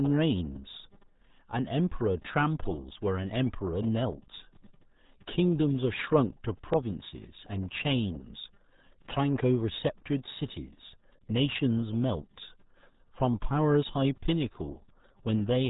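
From start to end the speech carries RealAudio 14.4 codec damage, consistent with an 8 kbit/s dial-up stream. Heavy coding leaves it muffled and gargly. A spectrogram shows a hard ceiling near 3.8 kHz with nothing above, and smeared, blotchy formant bands below.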